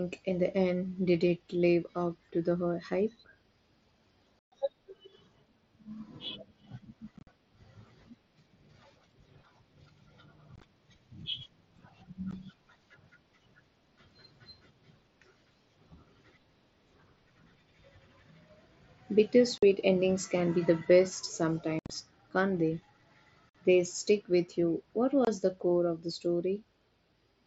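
Unconcealed Bluetooth headset packet loss: speech packets between headset and phone went missing and were replaced by silence rather than patched over, so the mSBC wideband speech drops out with hard edges. The holes fall at 4.40–4.52 s (about 128 ms), 7.17–7.27 s, 10.56–10.63 s, 12.31 s, 19.58–19.63 s, 21.79–21.90 s, 23.49–23.55 s and 25.25–25.27 s. The three at 7.2, 10.6 and 21.8 s are broken into scattered gaps, giving a rough, chopped texture. Their longest unbroken runs are 45, 22.5 and 67.5 ms, each several 7.5 ms frames.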